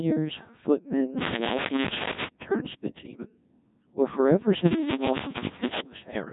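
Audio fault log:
throughout, Codec 2 vocoder: The speech has passed through a very low-rate parametric vocoder that discards the waveform and transmits only pitch, voicing decisions, energy and a coarse spectral envelope, with heavy damage consistent with a setting around 1.6 kbit/s. The decoder rebuilds each frame from summed sine waves, so the voice comes out robotic and buzzy, with a synthetic timbre. Nothing remains above 3.8 kHz, leaving the sound dull and band-limited.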